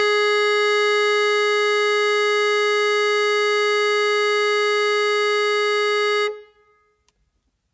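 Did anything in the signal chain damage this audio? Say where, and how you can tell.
No, nothing in the signal chain has damaged this music. It has passed through a call's microphone processing, which is working as intended and leaves nothing above 8 kHz.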